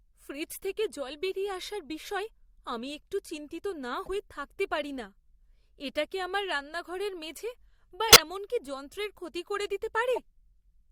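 Damaged bits in the compressed stream reached the decoder, which played the corrupt frames rather than concealing them. Misread codes and gains put energy at wrong frequencies, so each corrupt frame decoded comes out as a synthetic burst: a faint blip at 4.04 to 4.09 s spanning a couple of frames, a loud squeaking burst at 8.08 to 8.20 s across several frames and near full scale, and a moderate short chirp at 10.15 to 10.18 s.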